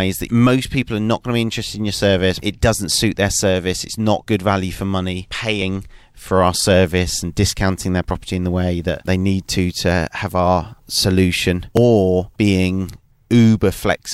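At 8.10 s and 11.77 s the speech jumps ahead by about 20 ms. Each is likely a dropped buffer (overrun), with unread samples overwritten and the edges spliced.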